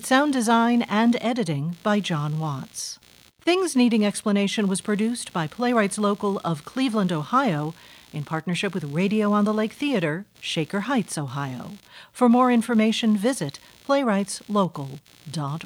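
It's a speech recording with computer activity noise running right through it: a buzzy, chirping layer pulsing at something like 70 times a second, sitting roughly 30 dB under the voice. It tracks the machine's workload, not the talking, so it's processor or graphics load shaking the shared audio ground.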